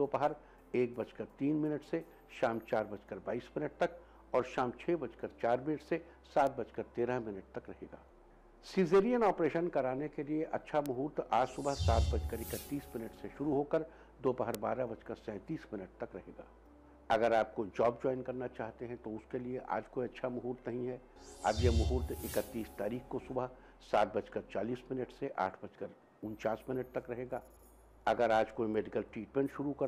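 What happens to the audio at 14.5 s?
A single bit flipped in one sample at 14.55 s, a bit error spike: the stored value jumps by a power of two and immediately returns. The result is one sharp, broadband tick with no connection to the surrounding sound.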